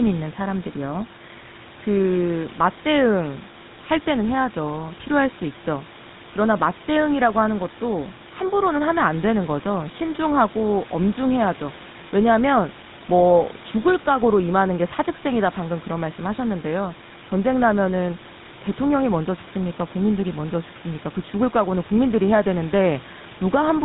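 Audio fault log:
throughout, GSM full-rate codec: the speech has a plainly audible buzzy, gravelly roughness, and nothing is left above 4 kHz. The codec rebuilds each stretch from a vocal-tract model driven by sparse, evenly spaced pulses, keeping only a third of the excitation, and that produces the grit. The damage fits a 13 kbps full-rate coder. A simple narrowband filter would sound dull but clean. Here the texture itself is coarse.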